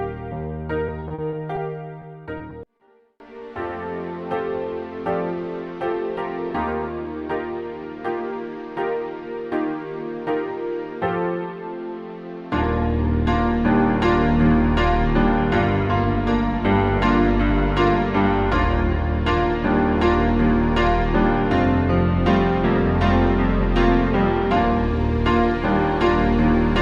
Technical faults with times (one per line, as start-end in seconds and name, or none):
0.87-2.90 repeated packet loss (robotic sound)